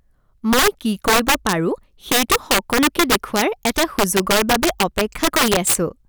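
Violent cracks burst from the loudest moments of this speech: integer overflow, where about 6 dB of overdrive pushes peaks past the integer limit, wrapping them to the opposite sign.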